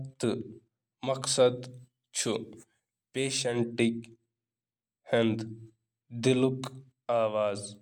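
Pre-emphasis left on, from 1.58 to 3.58 s: for these two seconds the speech carries a treble boost that was never undone. The lift follows the CD 50/15 µs curve, which raises the top end for storage and expects a matching cut on playback; here that cut is missing, leaving 10 kHz about 8 dB hotter relative to 1 kHz. The result is thin and glassy, with sibilants that hiss and spit.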